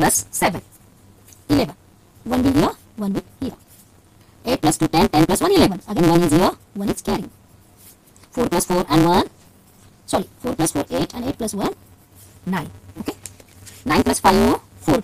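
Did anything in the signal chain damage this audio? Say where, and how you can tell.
Yes. From start to finish the sound carries a steady buzz at 172 Hz and plays about 1.88 times too fast, yet its pitch stays roughly where it should be. That points to a block size mismatch (truncated) at the driver or buffer stage. One stage hands over longer blocks than the next reads, and the reader drops each block's tail. The buzz rate fits a 256-sample read, and the speed-up reflects how much of every block is discarded.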